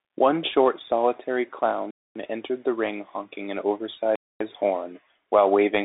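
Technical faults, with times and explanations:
Throughout: Bluetooth CVSD headset codec. The speech passes through a narrowband headset link, with nothing above 3.8 kHz. One-bit slope coding can't track fast, loud changes. So sibilants turn scratchy, peaks distort, and a granular hiss sits under everything.
1.91–2.16 s and 4.16–4.41 s: gap between chunks. The speech is interrupted by two 250 ms holes. They fall after each 2-second chunk. No sound is lost. Silence is simply inserted at the joins.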